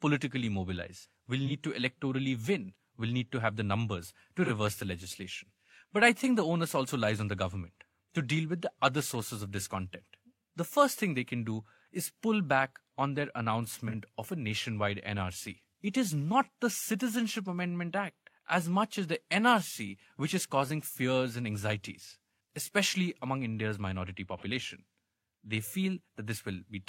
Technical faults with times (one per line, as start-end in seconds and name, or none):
1.46-1.52 AAC frame loss with concealment
4.45-4.51 AAC frame loss with concealment
13.87-13.94 AAC frame loss with concealment
24.37-24.43 AAC frame loss with concealment